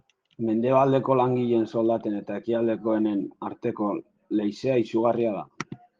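Nothing goes wrong anywhere in this speech clip, and the Opus voice compression carrying it at 24 kbps in its hybrid mode is simply doing its ordinary job.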